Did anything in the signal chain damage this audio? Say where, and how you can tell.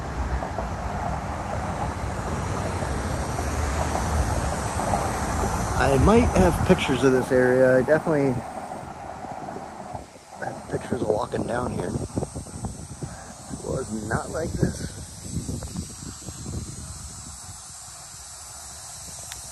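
No, nothing damaged this audio.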